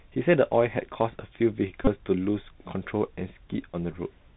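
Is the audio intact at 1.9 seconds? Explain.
No. The audio passes throughout through a Bluetooth CVSD headset codec that encodes each sample as a single up-or-down bit, fitting a 64 kbps stream. It is narrowband, so nothing above 4 kHz survives, and its adaptive step cannot follow fast changes. Loud bright passages smear, sibilants turn gritty, and a grainy hiss sits under the speech.

Just before that moment, from 1.85 to 1.89 s, a Bluetooth headset packet repeated. Lost voice packets, roughly 26 ms' worth, were filled by decoding the last good packet again. The 3.75 ms repetition produces a brief buzz near 267 Hz.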